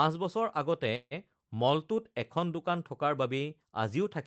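From 0.95 to 1.14 s a call audio freeze stretches the speech: about 155 ms of fading buzz, the last roughly 40 ms of it silence, likely from late packets draining the jitter buffer. Speech resumes with nothing lost.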